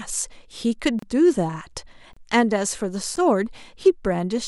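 Blocks of digital silence occur at 0.99 to 1.02 s, 2.13 to 2.17 s, and 3.16 s. At each one the speech drops straight to silence and returns with no fade. The two 32 ms gaps are heard as short holes. The 3.16 s dropout lasts about 11 ms, which fits a 512-sample buffer, and is heard more as a tick. The output buffer was likely not filled in time, so samples were replaced with silence.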